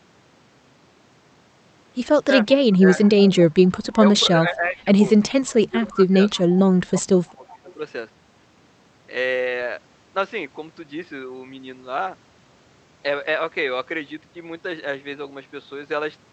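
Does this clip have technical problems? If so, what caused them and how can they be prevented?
Yes. There's an echo leak at 2.51 to 2.78 s, 3.77 to 4.19 s and 6.36 to 7.74 s: a faint copy of the speech trailing about 0.35 s behind, roughly 25 dB down. That's likely a loudspeaker on the far end whose echo canceller let some pickup through. Using a headset there, or tuning the canceller, would stop it.

Speech suppressed in double talk shows up at 2.82 to 4.88 s, 5.49 to 6.22 s and 6.93 to 7.68 s, where the voice ducks by around 15 to 20 dB while both sides overlap. That's likely the same canceller turning everything down because it couldn't separate the local talker from the echo. Better double-talk detection, or headsets that remove the echo in the first place, would prevent it.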